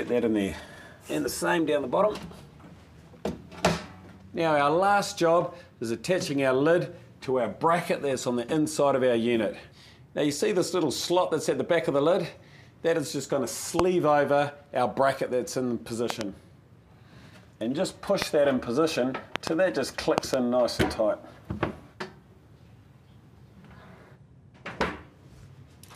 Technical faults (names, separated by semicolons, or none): loud pop